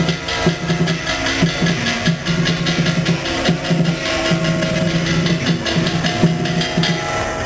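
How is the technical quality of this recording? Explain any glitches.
Two stretches of the recording play faster than they should. Jitter buffer speed-up occurs from 4.39 to 4.89 s and again from 5.39 to 7.42 s. The receiver's buffer had built up more delayed audio than it targets, so it shortened the backlog by repeatedly cutting out short pitch-period pieces. The first burst runs at 139% speed and drops about a fifth of a second, so it sounds clearly rushed. The second is gentler at 105%, losing around a tenth of a second with only a slight hurry. Pitch stays unchanged in both. The call codec's bandwidth limit is also present: nothing reaches above 8 kHz, so the top end is cut off.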